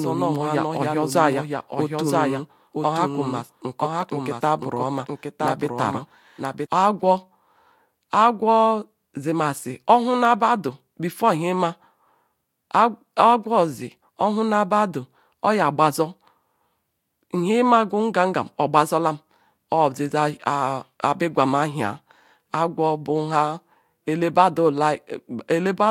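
From the start until 6.66 s, the speech carries a doubled audio track: a second, full-band copy trails about a second behind, roughly 5 dB quieter, most likely because the signal was captured again through a slower path. Unlike an echo or reverb, the copy has no decay tail and no room colouring, and it does not repeat or fade. It simply cuts out abruptly at 6.66 s.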